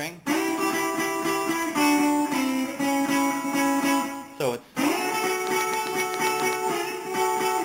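From 5.47 to 6.54 s, a steady ticking of about ten sharp, near-identical pops sits well above the sound, at a regular 7.6 clicks per second. This train of clicks most likely comes from interference or a faulty connection or power supply injecting repeated pulses.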